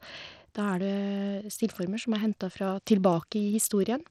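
Throughout the speech, the treble is missing above 16 kHz and the upper range flickers, with a gritty noise and aliasing riding on the sound. This points to heavily constrained Bluetooth SBC compression, likely around 80 kbps, starving the top sub-bands of bits and coarsely quantising the rest.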